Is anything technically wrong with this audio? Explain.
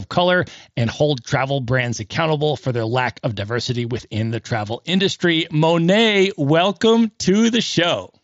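No, the speech comes through a wideband Bluetooth headset link using the mSBC codec, which carries it up to about 8 kHz as that path normally does, and nothing in the signal stands out as a fault.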